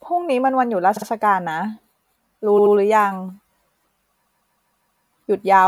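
At 0.96, 2.58 and 4.25 s the speech stutters with repeated frames. Blocks of 52 ms, 78 ms and then 157 ms replay, the last five extra times until 5.03 s. Unlike echo, the copies play back to back rather than overlapping, so the audio runs longer.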